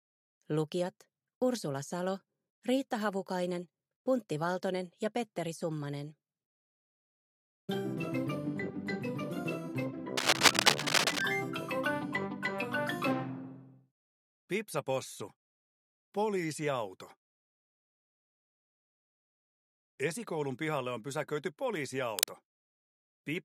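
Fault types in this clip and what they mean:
Cable scratch noise: Dense, uneven bursts of scratching and rustling sit on top of the sound, somewhat louder than the sound itself. The first burst runs from 10.16 to 11.21 s, about a second long. A shorter one follows from 22.17 to 22.34 s, near the end. The likely cause is a worn cable, connector or control being moved. Its contact resistance then jumps about rapidly and injects this crackle.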